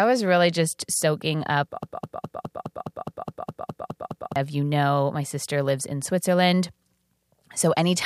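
At 1.83 s the speech catches on a short fragment and starts repeating. This is a broken-record loop. A piece about 0.21 s long plays back to back, exactly the same each time, 12 times over. The stutter runs until 4.36 s, when normal speech resumes. The cause is likely a stall in the player, encoder or stream, which kept resending the last fragment it held. The speech that belonged in those two and a half seconds is lost.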